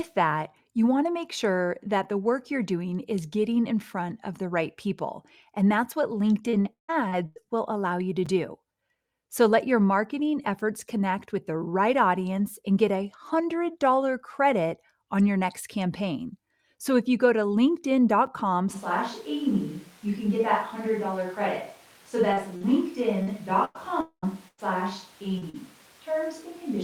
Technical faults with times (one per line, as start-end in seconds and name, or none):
6.49-7.47 repeated packet loss (robotic sound)
8.26 gap between chunks
18.26 gap between chunks
18.75-26.83 switch to a distant microphone
22.33-25.56 repeated packet loss (robotic sound)
24.00-24.25 long network dropout